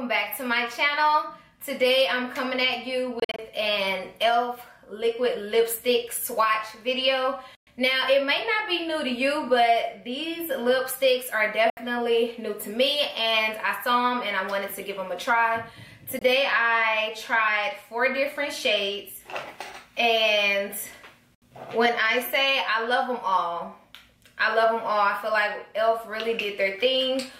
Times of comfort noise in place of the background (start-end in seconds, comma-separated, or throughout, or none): none